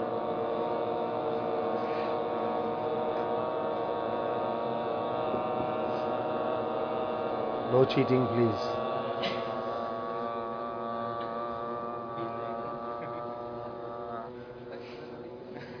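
No faults are audible anywhere in the clip.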